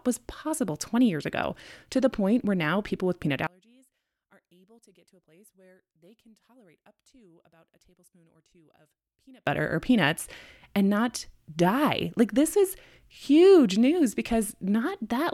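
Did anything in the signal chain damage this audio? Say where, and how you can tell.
Yes. From 3.47 to 9.47 s, between "now people with peanut" and "or peanuts and not", one channel was likely inverted, most plausibly a polarity swap in one leg of the analogue wiring. Summed to mono, the centred speech, identical in both channels, cancels, and the level drops by about 33 dB. Only a faint residue of the difference between channels survives. Full level returns at 9.47 s, when both channels are back in phase.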